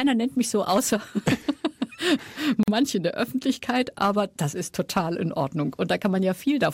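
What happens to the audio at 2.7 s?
A gap at a join of encoded pieces opens from 2.63 to 2.68 s: an about 45 ms gap where separately encoded pieces, roughly 6 s long, meet untrimmed, leaving start delay and end padding. It sounds like a sudden dropout, then the sound resumes where it stopped. A spectrogram shows a blank full-band stripe, and the waveform a flat line with slightly softened edges.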